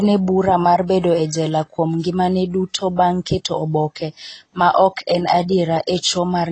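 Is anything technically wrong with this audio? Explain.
Yes. Throughout the speech there is AAC compression damage: content stops sharply at 8.3 kHz, a flat spectrogram ceiling, giving dull, smeared sound that points to a low bitrate, likely about 24 kbps AAC-LC.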